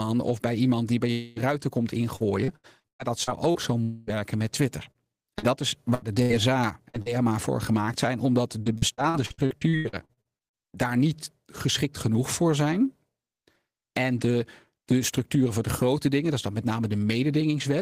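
A long network dropout hits from 1.11 to 1.39 s, between "bij iemand die bij" and "ruiten komt": roughly a quarter-second of speech is lost, and the gap is bridged by a fading buzz carried over from the last sound, likely because no packets arrived.

Repeated packet loss (robotic sound) follows from 2.16 to 3.58 s, just after "ruiten komt". Seven separate holes, the longest 116 ms, are each patched by stretching the preceding sound, leaving the speech choppy over about a quarter of that span.

The long network dropout recurs from 3.83 to 4.10 s, again with a fading buzz covering about a quarter-second of missing speech rather than silence.

Repeated packet loss returns from 4.91 to 7.09 s with six gaps up to 79 ms long, a lighter patch. It is heaviest from 8.62 to 10.55 s, between "voor gemaakt zijn omdat" and "daar niet geschikt genoeg", where sixteen gaps up to 81 ms make about a third of that stretch patched filler.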